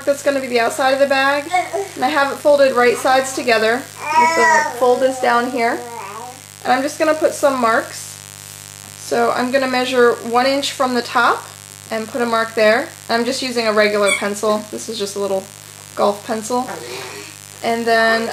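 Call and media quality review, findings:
Mains buzz, throughout: raspy 50 Hz buzz roughly 20 dB under the signal, harmonics reaching several kHz from switching spikes, unlike smooth low hum; check dimmer, rectifier or shielding.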